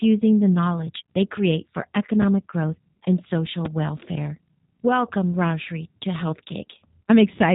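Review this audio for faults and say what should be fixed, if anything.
The whole clip carries G.729 codec damage: the speech is cut off above about 3.8 kHz and sounds rough and synthetic, which fits an 8 kbit/s stream. This codec rebuilds each 10 ms frame from a vocal tract filter, a pitch predictor and a few pulses, so the buzzy, modelled texture separates it from a simple band-limiting filter, which would dull the sound without roughening it. Carrying the call on a wideband codec such as G.722 or Opus would prevent it.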